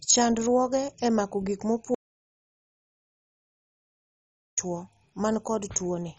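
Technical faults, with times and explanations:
Throughout: MP2 compression. Dull and gurgling with granular distortion and nothing above 10.3 kHz, likely low-rate MPEG Layer II switching off upper sub-bands, which fits roughly 32 kbps.
1.95 to 4.58 s: audio dropout to silence. The speech cuts to total silence with no room tone for 2.63 s, likely lost input while recording continued writing silence.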